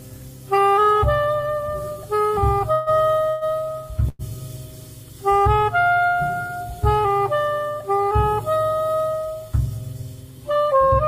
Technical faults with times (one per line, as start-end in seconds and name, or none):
2.72-3.04 call audio freeze
3.29-3.44 call audio freeze
4.09-4.22 call audio freeze
6.47-6.52 short stall from a late packet